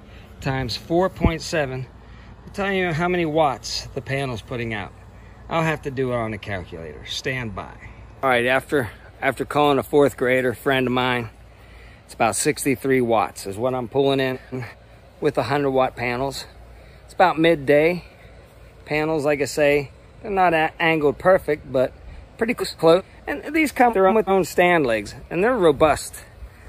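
The audio has three brief spots where frames are out of order: 14.33 to 14.75 s, 22.60 to 23.01 s and 23.90 to 24.31 s. In each, two neighbouring blocks of about 0.19 s play in swapped order. The later part comes first, then the earlier part. That turns the stretch into a garbled flutter. The block length fits runs of four frames. No time goes missing.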